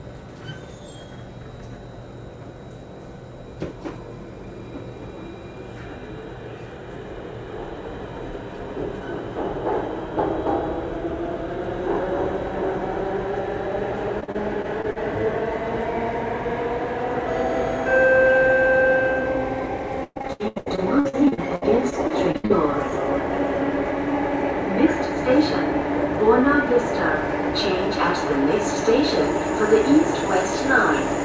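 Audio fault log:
14.20 to 14.98 s: repeated packet loss (robotic sound). Six short dropouts, the longest about 41 ms, each patched by stretching the last bit of sound. About a fifth of this stretch is filled in, so it goes briefly choppy.
20.04 to 22.52 s: repeated packet loss (robotic sound) again, and worse. There are 19 gaps, the longest 119 ms, and about a third of the stretch is concealed. It turns robotic with chunks missing, all within a band that stops at 8 kHz, which fits a G.722 call path.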